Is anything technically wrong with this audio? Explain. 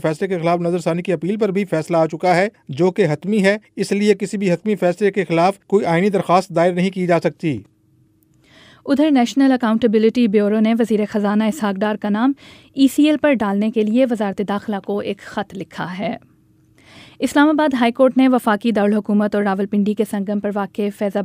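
No, nothing technically wrong can be heard in this audio. It contains no fault to report.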